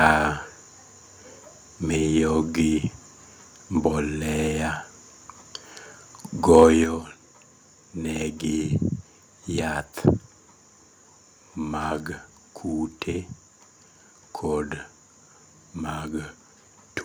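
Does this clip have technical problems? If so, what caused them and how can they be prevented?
Yes. From 6.55 to 6.64 s the loudest part of the speech takes on a harsh, crackling edge, with the peaks pushing roughly 2 dB past full scale and a few percent of samples flattened. This is microphone overload, most likely from an input volume set too high, so the waveform tops are sliced off at the converter's ceiling. Unlike a limiter or compressor, which would round the peaks smoothly, this flat cut adds gritty distortion. Setting the input level so speech peaks sit well below 0 dBFS prevents it.

At 6.84 s the speech and the background noise drop together by about 6 dB in a single abrupt step, and they stay at that lower level. This is a microphone volume step-down, likely the call software reacting to the distorted peak just before it by cutting the device's input volume. The simultaneous drop in background noise distinguishes it from a talker moving away from the microphone, which would lower the speech but leave the room noise unchanged. 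Fixing the input level manually and turning off automatic gain adjustment avoids the step.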